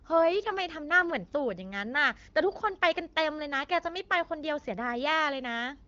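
The speech carries no technical faults, and its bandwidth stops at about 7.3 kHz with only light coding texture, which fits the AMR wideband (HD Voice) codec running at a mid-range rate of around 15.85 kbit/s.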